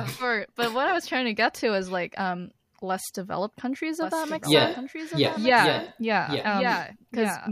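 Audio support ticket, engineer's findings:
Doubled audio track from 4.02 s, right after "um less developed countries", to end: full-band copy about 1 s behind, roughly 5 dB down. Likely second capture path or out-of-step edit.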